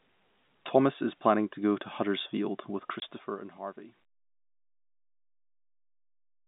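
This speech clip, carried over a telephone-band line, has a single short dropout: from 3.00 to 3.02 s the sound cuts to a 20 ms hole of dead silence with hard edges. This is packet loss filled with silence. The gap's length fits one lost 20 ms packet, which the receiver replaced with nothing.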